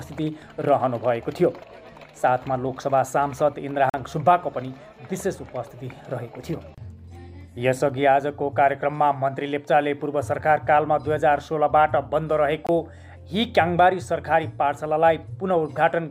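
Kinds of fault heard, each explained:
Bluetooth dropout: two brief silent gaps of 43 and 21 ms, sound resuming as if it played on; likely packets arriving too late and dropped.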